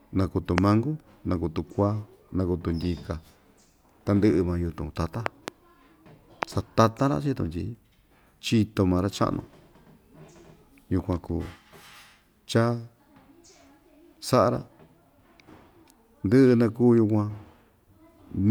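Speech runs under three loud pops: a sharp crack from 0.58 to 0.60 s standing about 20 dB above the sound, a quick double pop between 5.26 and 5.50 s, and another single crack from 6.43 to 6.45 s, the latter two about 15 dB up. The speech continues underneath each one. The likely cause is a sudden voltage step or pulse, from a plug, switch, static discharge or driver glitch, added to the signal and shaped by the circuits that follow it.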